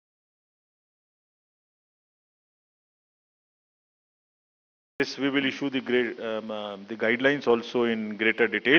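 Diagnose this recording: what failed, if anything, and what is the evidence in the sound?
An audio dropout to silence runs from the very start until 5.0 s: the first five seconds are silent with no room tone, then sound enters mid-flow. The likely cause is a lost input link or device, with the recorder still writing zeros.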